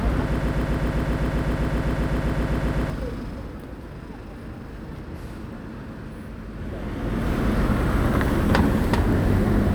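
From 0.36 to 2.90 s, a 129 ms fragment repeats back to back about 20 times, a broken-record loop, likely from a stalled player re-sending its last fragment.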